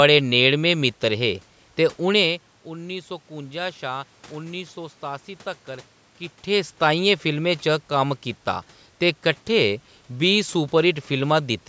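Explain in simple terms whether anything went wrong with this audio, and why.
Nothing went wrong with this speech recording. Some background sound from the room is audible, the talker's level shifts around 2 and 6 seconds as they move relative to the microphone, and the call's microphone processing keeps the sound below 8 kHz, all of which is normal.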